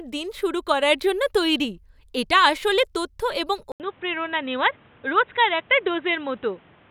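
At 3.72 s, after "এটা আসলে তথ্য এবং", 80 ms of silence, then dull speech capped at 3.9 kHz with faint new background noise, likely from input switched to a poorer device.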